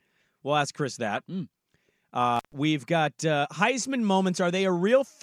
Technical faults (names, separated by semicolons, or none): intermittent contact